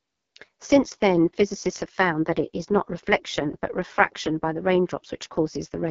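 AMR wideband (HD Voice) codec damage runs from start to end of the speech. The codec rebuilds the voice from a simplified vocal tract model excited by sparse pulses, and here it is starved of bits, so the voice comes out rough, raspy and buzzy. That heavy coarseness points to the codec's lowest mode, around 6.6 kbit/s. Nothing is present above about 6.6 kHz, leaving the top end dull.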